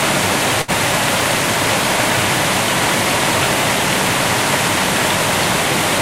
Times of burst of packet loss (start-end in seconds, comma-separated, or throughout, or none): 0.61-0.71